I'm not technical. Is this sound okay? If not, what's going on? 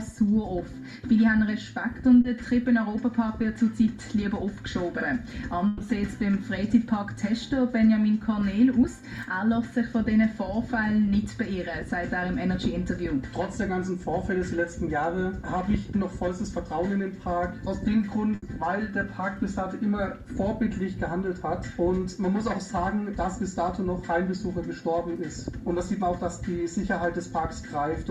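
No. There are two kinds of dropout. Short concealed packet loss occurs at 2.21 to 2.25 s (30 ms) and at 3.42 s. Small pieces of audio arrived too late, and the receiver covered each hole by extending the preceding sound, leaving a brief smear or wobble.

A burst of packet loss, a longer run of missing audio, occurs at 5.67 to 5.81 s (130 ms) and 18.35 to 18.43 s (70 ms). The receiver stretches the last sound into a fading buzz or hiss, and the audio resumes with a piece skipped.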